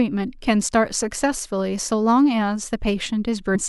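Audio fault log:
3.54 s compressed frames skipped. The speech jumps forward by roughly 300 ms. That fits about ten 26.1 ms frames that were missing or rejected by the decoder.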